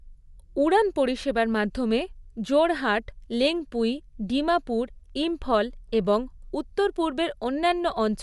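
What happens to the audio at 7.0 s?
At 7.0 s the speech has the same damage it carries from start to finish: nothing survives above about 11.6 kHz, and the upper band sounds breathy and grainy. That's likely Bluetooth LC3 compression. The transform codec throws away much of the top spectrum and pads it with shaped noise, and the artefacts here fit 10 ms frames at a modest bitrate, somewhere around 48 kbps.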